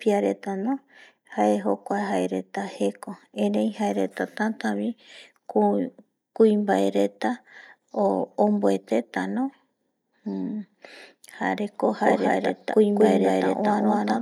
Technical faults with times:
12.02-14.21 doubled audio track

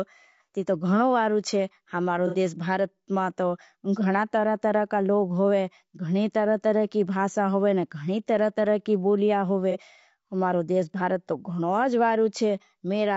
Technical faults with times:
0.00-13.16 low-delay AAC compression
2.27-2.35 AAC frame loss with concealment
9.71-9.79 AAC frame loss with concealment

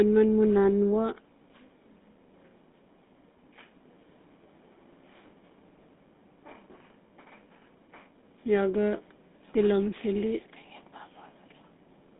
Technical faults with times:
0.00-12.20 GSM full-rate codec

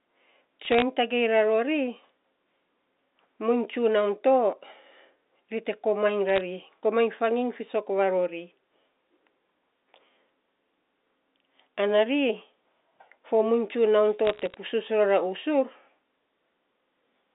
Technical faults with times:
0.65-0.82 bit errors on a digital phone line
6.29-6.41 bit errors on a digital phone line
14.25-14.57 bit errors on a digital phone line

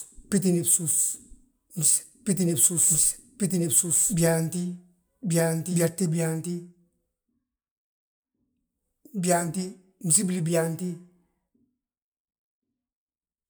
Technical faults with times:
0.00-5.90 doubled audio track

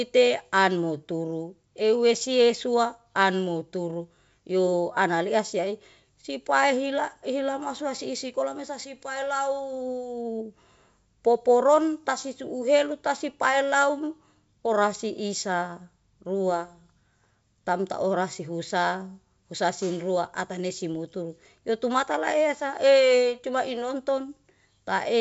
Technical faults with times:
none

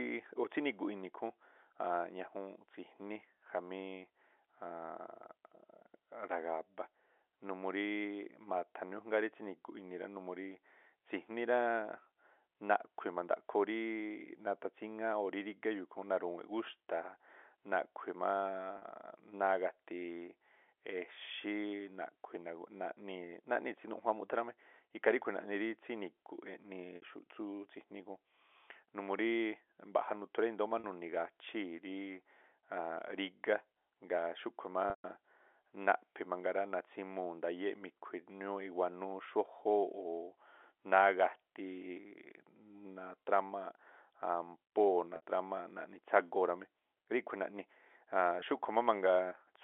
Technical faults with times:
18.78-18.82 packet loss with pitch repetition
26.96-27.02 packet loss with pitch repetition
30.80-30.84 packet loss with pitch repetition
34.90-35.04 packet loss with pitch repetition
45.16-45.22 packet loss with pitch repetition
48.40-48.42 packet loss with pitch repetition

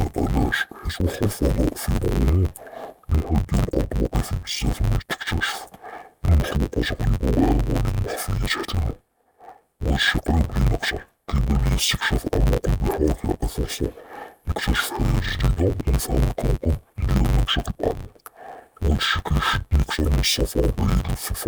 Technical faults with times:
0.00-21.47 interleaved audio read as planar

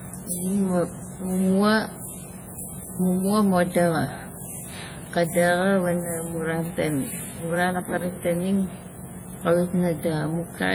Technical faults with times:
0.00-10.75 WMA compression

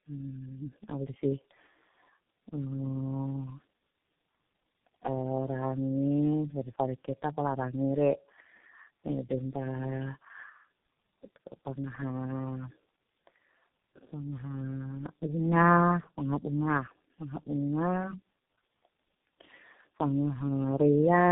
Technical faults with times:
0.00-21.32 tandem speech coding

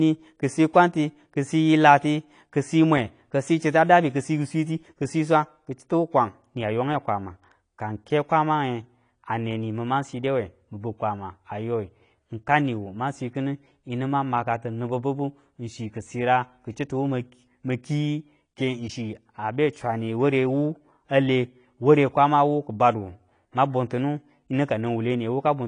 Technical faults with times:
0.00-25.67 AAC compression

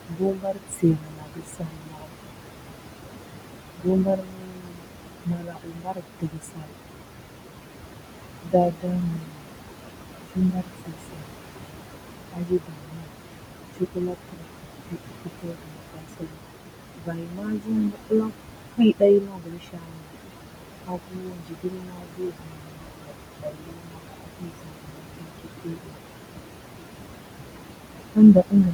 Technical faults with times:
0.00-28.73 channel delay (comb filtering)
0.00-28.73 noise suppressor artifacts
0.08-2.13 speech cut by the noise suppressor
3.78-6.73 speech cut by the noise suppressor
8.43-11.24 speech cut by the noise suppressor
12.33-26.00 speech cut by the noise suppressor
28.14-28.73 speech cut by the noise suppressor

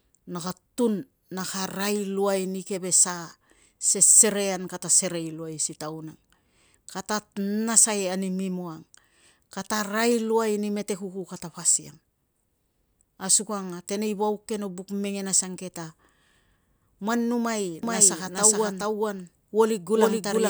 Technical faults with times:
17.83-20.50 doubled audio track

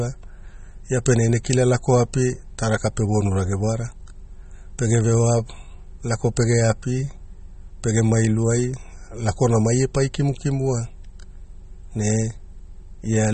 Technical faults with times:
0.00-13.33 MP3 compression

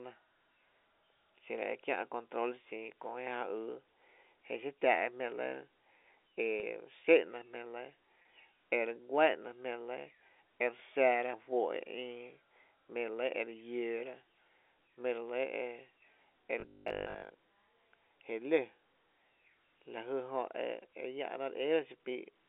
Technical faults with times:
6.60-6.63 packet loss with pitch repetition
8.22-8.25 packet loss with pitch repetition
16.60-17.32 robotic sound from repeated short buffers

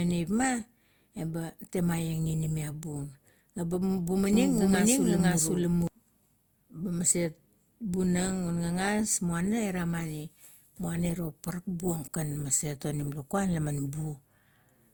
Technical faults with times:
0.00-14.94 low-bitrate audio saved at a high bitrate
4.33-5.87 doubled audio track

